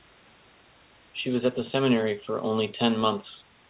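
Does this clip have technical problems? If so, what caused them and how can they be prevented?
No, the speech arrives intact over a G.711 mu-law call path at 64 kbps, with the expected absence of content above 4 kHz and room noise sitting about 32 dB below the speech.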